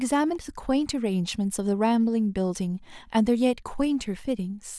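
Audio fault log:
Nothing stood out on listening to this speech recording.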